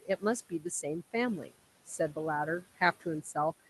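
Noise suppressor artifacts run through the whole clip. The suppressor judges, frame by frame, which frequency bands hold steady noise and pulls them down, here by about 16 dB. The room noise, which sits about 17 dB below the speech, therefore drops away in the gaps and swells back up underneath the speech whenever the suppressor lets a band through. That constant switching leaves the remaining background with a pumping, uneven texture instead of a steady bed.

Speech cut by the noise suppressor occurs at 0.02 to 0.23 s, 0.49 to 0.66 s and 1.43 to 1.55 s. In each span the suppressor mistook quieter parts of the speech for noise and lowered them with the background, by about 17 dB, 16 dB and 18 dB at the deepest point. Each time, about a tenth of a second of sound is affected. Those portions come across as swallowed or faint against the Opus call audio, whose bandwidth tops out at 12 kHz, with a 32 kbps setting.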